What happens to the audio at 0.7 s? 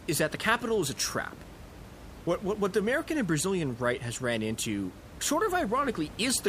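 At 0.7 s the audio is intact, with only the room's own background noise sitting about 18 dB below the speech.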